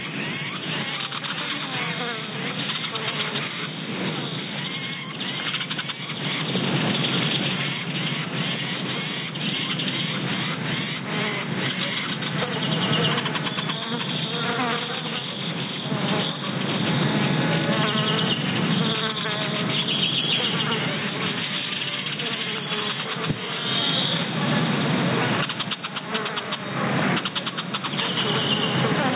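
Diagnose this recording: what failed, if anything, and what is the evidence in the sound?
What failed is gain pumping, and it runs through the whole clip. The gain swings something like 15 dB. The loud and soft parts end up squashed close together. The likely cause is mic gain set far too high, with a fast limiter or compressor clamping down on each peak and releasing in the gaps. The top end stopping near 4 kHz just fits a G.711 call path.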